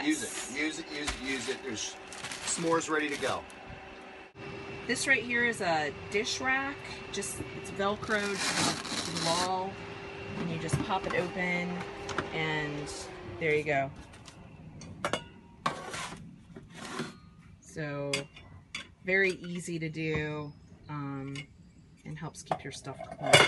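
Nothing technical stands out here; the audio runs along without any dropouts, glitches or other problems worth pointing to.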